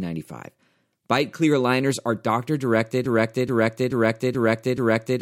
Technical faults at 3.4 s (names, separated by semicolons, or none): broken-record loop